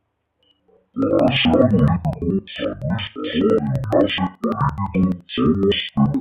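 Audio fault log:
Throughout: interleaved audio read as planar. Each stereo block of about 85.3 ms, which fits a 4096-sample buffer, is split down the middle instead of sample by sample, so the first half of the block feeds the left channel and the second half the right. Each channel plays its half stretched to the full block length, dropping the speech a full octave, while the two channels carry different moments side by side. The result is a doubled, choppy voice that stutters 11.7 times per second.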